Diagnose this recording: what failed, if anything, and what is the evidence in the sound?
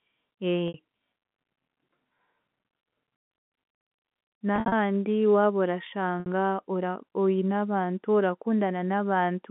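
Brief buzzy, held tones at 0.68 s, 4.56 to 4.72 s and 6.2 s point to network packet loss with pitch repetition bridging gaps of up to 60 ms.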